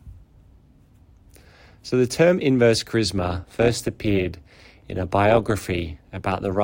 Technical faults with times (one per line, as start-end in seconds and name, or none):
3.17-6.63 overlap-add ripple